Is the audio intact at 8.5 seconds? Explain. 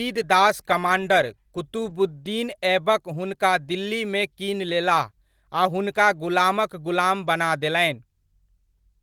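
Yes, the speech at 8.5 seconds is intact, with no fault to be heard at that moment.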